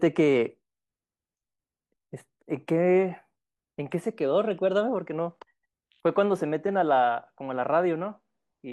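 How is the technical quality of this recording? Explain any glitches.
No glitches to report: the speech recording runs without any audible dropouts, clicks, distortion or level faults.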